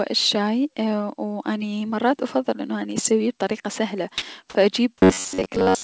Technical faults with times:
4.18-4.22 sound dropped by the voice detector
5.01-5.83 robotic sound from repeated short buffers

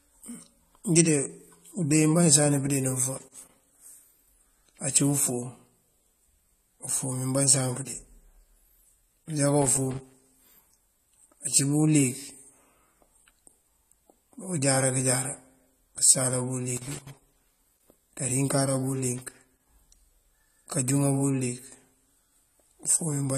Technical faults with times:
0.00-23.37 AAC compression
3.18-3.78 loose connector crackle
9.62-10.28 loose connector crackle
16.77-17.88 loose connector crackle
19.18-19.81 loose connector crackle

